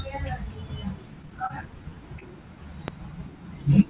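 Repeated packet loss (robotic sound) runs from 1.22 to 1.74 s. Five gaps follow in quick succession, the longest about 31 ms, and each is patched by extending the preceding sound. About 80 ms is filled over the stretch, so the speech turns choppy and robotic, with fragments missing.

The jitter buffer slow-down comes next, from 1.77 to 1.96 s. To rebuild its reserve, the receiver repeats single pitch periods, adding 36 ms. Delivery drops to 85% speed while the pitch holds steady, so the speech sounds drawn out.

Short concealed packet loss occurs at 2.20 to 2.23 s. A 20 ms hole is bridged by continuing the last sound from its pitch or as shaped noise, then blending back into the real signal. This leaves a brief smear or wobble, and a short sound may drop out.

A loud pop at 2.88 to 2.90 s is a single sharp transient, peaking about 15 dB above the speech, with the speech continuing beneath it. 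It is likely an electrical step, such as a plug, switch, static discharge or driver glitch, that the following circuitry briefly shaped.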